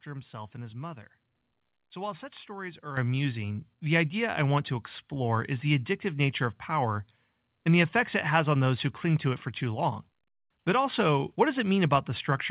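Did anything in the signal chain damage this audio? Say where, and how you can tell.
Yes. At the call-processing stage, the microphone volume stepped up at 2.97 s, between "while such stories are" and "amusing the idea": speech and background noise jump together by about 9 dB in a single step. Automatic gain control judged the input too quiet and raised the device's capture level at once, mid-phrase. On the waveform the envelope, noise floor included, widens abruptly there. A spectrogram shows every band brightening at the same instant, below a ceiling at 4 kHz from the narrowband call path.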